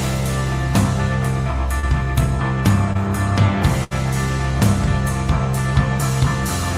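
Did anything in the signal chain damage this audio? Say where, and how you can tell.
Yes. Three kinds of damage are audible, two from the network and one from the playback buffer.

Short concealed packet loss appears at 1.79 to 1.85 s and again at 2.93 to 2.98 s. This is network damage. Each time, a brief smear or wobble replaces the real sound. The receiver's decoder got nothing in time, so it extended the last sound to cover the gap. In the first event, 33 ms of fill stands in for 40 ms lost. In the second, 20 ms was lost and the patch stretched timing by roughly 10 ms.

A burst of packet loss occurs from 3.84 to 3.93 s, also at the network stage. It lasts longer than the short losses. The concealment keeps the previous sound going for about 70 ms and fades it as the gap goes on. The audio then picks up further along, so about 60 ms of the original is simply gone. You hear a held, dying tail and then a jump.

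A block of digital silence hits at 5.58 s. It is a tiny, hard tick with no fade. The output dropped to zero for about 2.9 ms and came straight back. This is a driver or buffer fault. The program likely failed to fill one output buffer in time. The length fits a 128-sample buffer.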